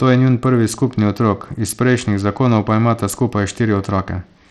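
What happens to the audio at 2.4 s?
At 2.4 s the speech is still passing through what is likely Bluetooth SBC compression, which affects the whole clip rather than this moment alone. A small bit pool, consistent with a bitrate around 80 kbps, starves SBC's upper sub-bands and quantises the rest coarsely. The damage is plainly audible: the treble thins and flickers in and out, and a gritty, aliased roughness rides on the speech.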